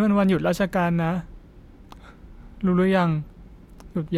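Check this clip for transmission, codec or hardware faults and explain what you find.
One fault turns up in the speech, late in the clip: a corrupt frame decoded, from 3.24 to 3.27 s. It sounds like a brief, quiet glitch, sitting low at roughly -45 dBFS. What likely happened is that a couple of compressed frames arrived with flipped bits and the decoder played them anyway, reading garbage gains and codes. That puts energy at the wrong frequencies for about a frame's length each, so you get a short stray chirp, squeak or blip.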